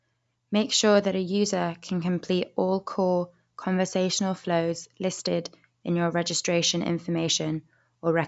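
Nothing in the recording stood out as a technical problem when listening through it.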